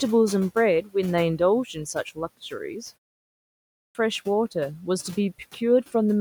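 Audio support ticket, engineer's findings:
Speech cut by the noise suppressor, 0.82–0.95 s: speech swallowed, dips about 18 dB with the background; spectrogram shows speech energy abruptly thinned, suppressor gating speech as noise.

Clipped start after a pause, 3.38–3.95 s: 0.57 s missing after a 0.48 s gap; waveform starts abruptly, flat before. Output device waking or relocking too slowly.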